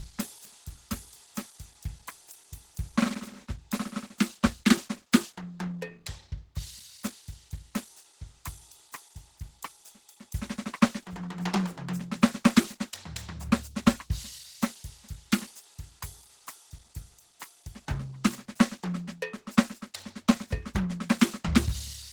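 Throughout, the music was likely squeezed through Opus compression at a very low rate, fitting about 16 kbps. That gives a hoarse, grainy roughness, though content still reaches about 20.2 kHz.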